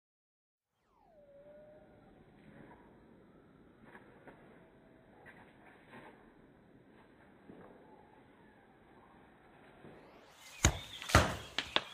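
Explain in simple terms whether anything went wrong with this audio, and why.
Compressed frames skipped: whole blocks of the compressed audio went missing or were rejected by the decoder as damaged, so they never played. At 4.30–4.34 s, 5.46–5.50 s and 7.18–7.21 s the sound jumps ahead by roughly a fifth of a second (about 0.15 s at 5.46 s).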